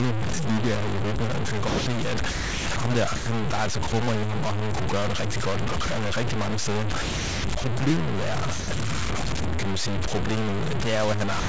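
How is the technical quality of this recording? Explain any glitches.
The speech is heavily degraded: it is coarse and gritty throughout and drops out repeatedly into brief stretches of steady hiss.

Low bit depth without dither affects the whole clip. The speech sounds harsh and grainy, and the distortion shifts with every syllable, with noise roughly as loud as the speech. Quiet parts sputter or vanish. This is likely 3-bit truncation without dither, so the rounding error tracks the signal.

Sound dropped by the voice detector happens at 1.68 to 1.86 s, at 3.16 to 3.26 s just before "der er altså", at 3.90 s, at 5.86 s right after "gøre det rigtig godt", at 8.60 to 8.68 s, and from 11.40 s to the end. Each time the sound gives way to steady noise or near silence. The likely cause is a detector misreading quiet speech or a word ending as background and sending comfort noise instead.

Sound chopped by the voice detector occurs at 2.30 to 2.76 s and at 7.02 to 7.64 s, the second just after "rigtig mange steder". 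In both, the speech stutters. This is likely the detector toggling on and off, so pieces of syllables are replaced by comfort noise.

The call codec's band limit is audible as nothing above 8 kHz.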